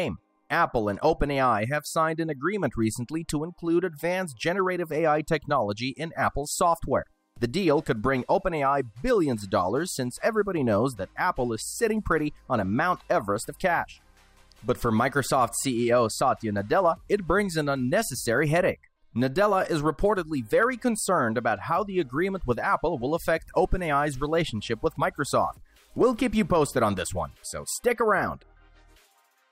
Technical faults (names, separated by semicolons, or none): none